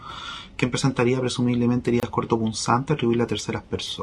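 At 2.0 s a gap at a join of encoded pieces opens: about 28 ms of silence, from separately encoded segments spliced with their encoder delay and end padding left in. It sounds like a brief dropout before the sound resumes where it stopped, showing as a thin vertical blank band with smeared edges.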